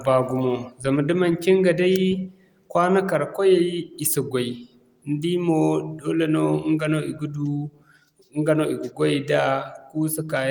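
No technical faults can be heard anywhere in the recording, and the signal stays steady and intact throughout.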